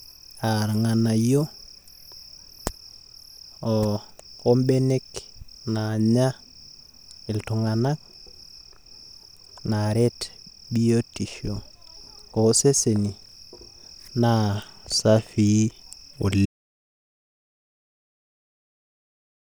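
At 16.46 s the speech stops dead mid-flow and the remaining 3.1 s, through to the end of the clip, is complete silence with no room tone or background hiss at all. This is an audio dropout to silence. The recording carried on writing silence after the input was lost, most likely through a disconnected device, a failed link or an accidental mute, so whatever followed in that final stretch was never captured.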